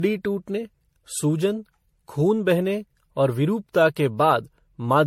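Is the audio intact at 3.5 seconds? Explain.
No. Generation loss runs through the whole clip, including 3.5 s. The speech was likely re-encoded with MP3 about seven times, each pass requantising on a shifted frame grid, so the sound is swirly, smeared and hollow, with blurred attacks and nothing above 16.5 kHz.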